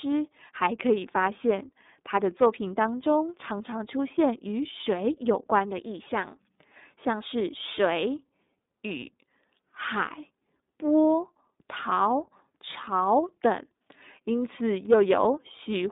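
Throughout, the speech passes through the iLBC codec. Nothing above 3.8 kHz survives. Each 30 ms frame is coded alone, leaving a plainly rough, synthetic edge, which fits a 13.33 kbps mode.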